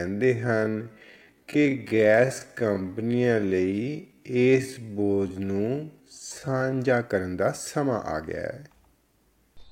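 A time-stretched section runs from the start to 6.8 s. The speech plays at about 0.53 times its normal pace, roughly half speed, yet its pitch stays natural. This is likely because software stretched the passage to fill a set length, repeating short slices of the waveform rather than slowing the playback rate. The result drags, each syllable drawn out, until the pace jumps back to normal at "ਕਰਨ ਦਾ ਸਮਾਂ".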